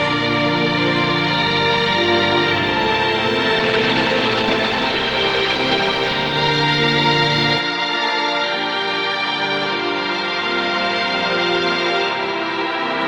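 From 3.6 s to 6.91 s, a call bitrate drop takes the encoder from 32 kbps down to 15 kbps, bottoming out for about 2.2 s. With far fewer bits, the coding becomes coarse and the upper band is trimmed, so the sound turns rough, watery or muffled until the rate recovers.

At 7.58 s the band abruptly narrows, with nothing above 11.4 kHz, and the level falls by roughly 5 dB. A new noise floor appears around 45 dB below the signal, and there is no gap at the change. The likely cause is the input being switched to a poorer device.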